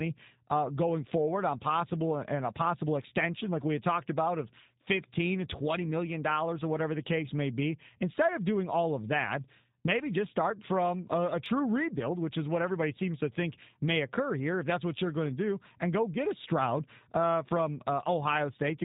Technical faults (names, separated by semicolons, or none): G.729 codec; dropped samples